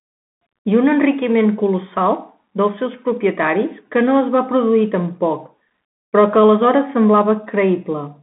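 Throughout, the speech passes through a Bluetooth CVSD headset codec, coding each sample as one adaptive up-or-down bit, consistent with a 64 kbps link. Only 150 Hz to 3.6 kHz survives, so it sounds thin. S sounds turn scratchy, over a granular hiss.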